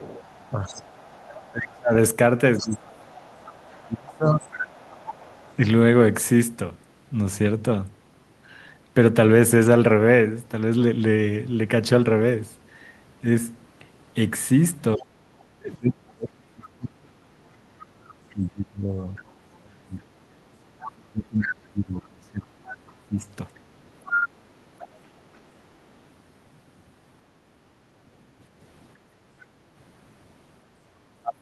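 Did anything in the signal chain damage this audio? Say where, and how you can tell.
Yes. The damage sits in the call processing, at the echo canceller.

Other side's voice leaking through appears twice. A second voice runs under the speech from 0.0 to 5.54 s, faint and well below the talker. It returns from 16.67 to 24.88 s, now nearly as loud as the talker. The likely cause is a loudspeaker feeding the microphone, with the canceller leaving a residue. It fails worst in the second stretch, where the leak is strongest.

Speech suppressed in double talk shows as dips in the talker's level. The first comes between 0.51 and 4.56 s and adds up to about two seconds. Its deepest drop is around 25 dB. The second runs from 14.96 to 23.27 s and adds up to about seven seconds, dropping by around 35 dB. Both overlap the leaking voice. So the canceller likely could not separate its talker from the echo and turned everything down.

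Background gated by the echo canceller shows up at 20.42 to 20.54 s. The room sound dips by about 6 dB for roughly a tenth of a second, then comes back. This is the canceller clamping the microphone while the loudspeaker plays. It releases almost at once. The dip falls inside the second stretch of leakage.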